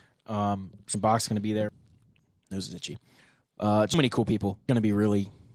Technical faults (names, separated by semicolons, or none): audio missing between chunks